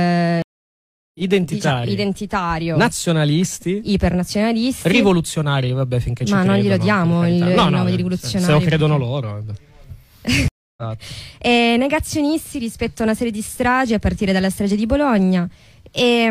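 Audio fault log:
0.42–1.20 s and 10.48–10.83 s, stream reconnect: the connection dropped, giving about 0.73 s and 0.29 s of silence. A fresh decoder then picks up mid-stream, so the audio resumes roughly half a second and 0.3 s further on, skipping material.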